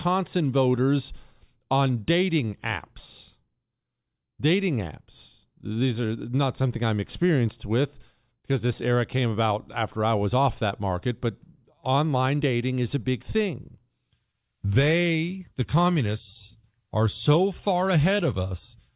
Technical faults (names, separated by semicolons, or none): none